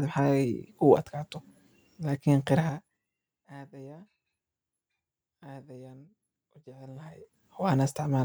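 From 2.60 to 3.07 s the speech drops by roughly 25 dB in 5 dB jumps, about ten a second, and each jump leaves a small click. This is zipper noise: gain moved in unsmoothed increments. From 6.87 to 7.52 s the level climbs back by a similar amount in 3 dB steps with the same ticking. A smooth fader move glides silently; here the steps themselves are audible.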